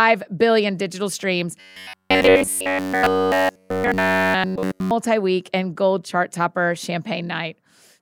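From 1.60 to 4.92 s, after "billion digital streams" and before "week and gold chart", speech turns into a rigid metallic buzz near 94 Hz, the robotic sound of repeated short buffers. It is likely caused by audio arriving too seldom, so short fragments of roughly 11 ms are looped throughout. A spectrogram shows evenly spaced horizontal harmonics; the waveform shows identical repeating cycles.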